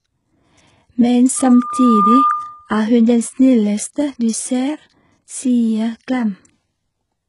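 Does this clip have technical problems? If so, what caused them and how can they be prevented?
Yes. Throughout the speech, the treble is bright but gritty and metallic, s sounds come out lispy, and nothing is present above 11.1 kHz. This is likely HE-AAC compression with heavy damage, consistent with a very low bitrate around 12 kbps. The upper band is rebuilt by copying lower bands upward, so its harmonics don't match the real voice. A plain low-pass would sound dull instead, not falsely bright. To prevent it, encode at a higher bitrate or use a codec that codes the full band directly.

From 1.36 to 2.70 s, a loudspeaker feedback squeal appears as a single 1.2 kHz tone. It swells over roughly the first 0.7 s until it sits a few decibels above the speech. It is a loop: the microphone hears its own loudspeaker, and at that frequency the gain exceeds one, so the tone grows on its own. A steady interfering hum or whistle would start at full level instead of building up. 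To prevent it, lower the gain, move the microphone away from the loudspeaker, or notch that frequency.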